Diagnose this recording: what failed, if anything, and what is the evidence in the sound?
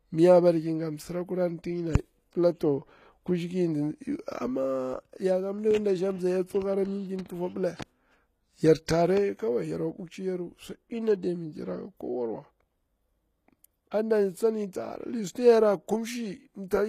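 The codec stage failed. Throughout the speech the treble stays bright but sounds synthetic: sibilants come out gritty and metallic, and nothing is present above 14.9 kHz. This is most likely HE-AAC compression at a very low bitrate, around 20 kbps, where spectral band replication copies lower bands upward under a coarse envelope. A plain low-pass codec would leave dull, missing treble instead. Here the treble is present but rebuilt, and its harmonics fail to line up with the band below.

The pre-echo also comes from the codec stage. At 8.86 s a brief hiss of about 20 ms sits just ahead of a sharp onset, and the onset itself sounds softened rather than crisp. The transform block spread quantisation noise scaled for the loud attack across the quiet moment before it. A click or dropout would be a single discontinuity at the attack. This noise runs before the attack and shares the onset's spectral colour.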